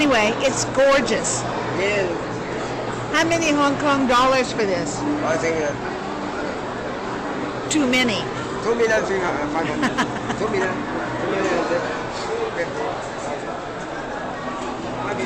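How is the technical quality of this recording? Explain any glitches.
The technical quality of this recording is sound, with no glitches to explain.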